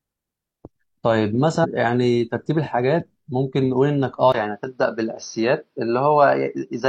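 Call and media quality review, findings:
Compressed frames skipped at 1.60–1.66 s: speech jumps ahead by roughly 150 ms. Decoder dropping missing or damaged frames, about four, which fits a frame length near 43 ms.

Input switched to a poorer device at 4.32 s, through to the end: 20 ms gap, then speech goes dull with nothing above 6.2 kHz, same loudness, new faint noise far below the speech. Likely a mid-call mic or headset-profile change.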